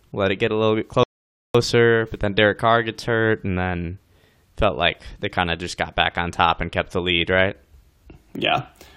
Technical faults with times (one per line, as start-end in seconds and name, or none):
1.03-1.55 rebuffering stall